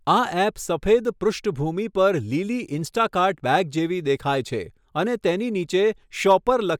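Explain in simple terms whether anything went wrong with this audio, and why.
Nothing went wrong with this speech recording: the signal carries through with no dropouts, glitches or other technical faults.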